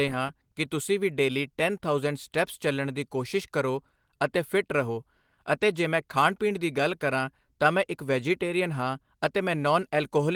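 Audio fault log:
No faults detected.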